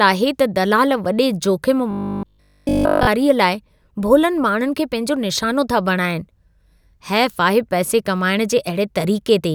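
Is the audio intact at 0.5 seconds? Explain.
Yes, at 0.5 seconds the audio is intact, with no audible fault at that moment.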